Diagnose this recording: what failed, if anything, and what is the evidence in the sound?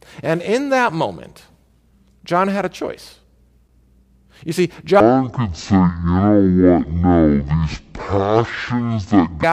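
A stereo-read-as-mono fault in sample-format handling takes hold from 5.00 s to 9.43 s. The speech drops to half speed and falls a full octave, 12 semitones, in a single step, and a faint mirrored copy of the spectrum appears in the upper half of the band. Left and right samples are being read consecutively as one channel, so each frame is counted twice. That doubles the duration and halves every frequency.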